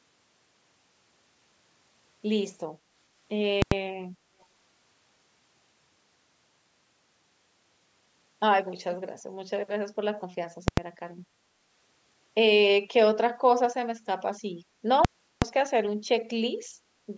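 Invalid numbers at full scale hit this speech recording three times, at 3.62 to 3.72 s, 10.68 to 10.77 s and 15.05 to 15.42 s. Each time, a calculation produced infinite or invalid values that were clamped to the largest positive or negative sample, so the output is pinned at one extreme value, far beyond the speech peaks, for a whole processing block. The first two last about 93 ms, which fits a 4096-sample block, and land as single loud bangs. The third runs about 372 ms, which fits a 16384-sample block, and is heard as a sharp pop, a stretch with no sound, then another pop. Echo leak appears briefly at 4.41 to 4.45 s as a faint scrap of the voice repeated about 410 ms late and roughly 40 dB below the speech. It is most likely the far end's loudspeaker output reaching its microphone and slipping past an echo canceller that did not fully remove it, so the residue was sent back down the call.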